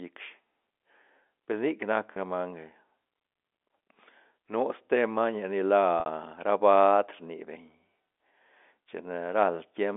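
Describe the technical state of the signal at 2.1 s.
Around 2.13 to 2.16 s, about 30 ms of the stream failed to arrive, which fits a single lost packet. The receiver concealed it through packet loss with pitch repetition, looping the last pitch period of the speech to fill the hole. Because the gap is so short, the concealment never fades to silence; it comes across as a brief, slightly held, buzzy sustain before normal speech resumes over the narrow telephone band.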